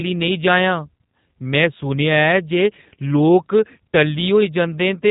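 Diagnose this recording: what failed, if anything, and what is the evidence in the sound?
The codec stage failed. G.729 codec damage is plainly audible throughout the speech. Nothing passes above 3.8 kHz. The speech sounds rough and synthetic, rebuilt from a vocal tract filter, a pitch predictor and sparse pulses per frame. This fits an 8 kbit/s codec.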